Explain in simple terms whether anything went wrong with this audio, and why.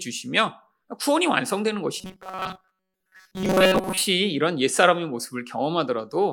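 Between 2.00 and 4.01 s, new audio most likely arrived too seldom, so the playback kept filling the gaps by repeating a tiny slice of about 5 ms while most of the real sound was skipped. This fault is called robotic sound from repeated short buffers. Looping such a short slice over and over stamps a fixed buzz of 188 Hz onto the speech, so for those two seconds it turns stiff and metallic, only loosely following the original.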